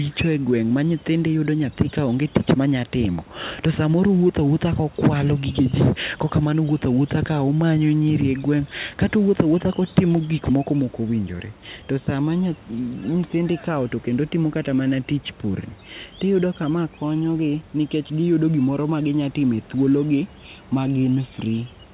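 No faults heard: the speech carries the band limit of a narrowband call path, with nothing above 4 kHz as fits G.711 mu-law, over room noise about 29 dB below the speech.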